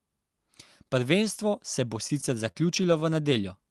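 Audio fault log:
2.07–3.27 s, repeated stalls (stutter): after "se bo", the jitter buffer ran dry nine times, and each gap of up to 35 ms (about 123 ms in all) was filled by stretching the last sound. The speech drags and stutters. A spectrogram shows smeared, repeated frames, and the waveform shows brief sustained segments.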